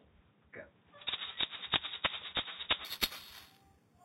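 From 2.85 s to the end, a bright, metallic fizz rides on top of the sound, rising and falling with its level. This is imaging from sample-and-hold upsampling: mirrored copies appear from 4 kHz to 8 kHz at about -4 dB, consistent with an 8 kHz source raised to 44.1 kHz without smoothing.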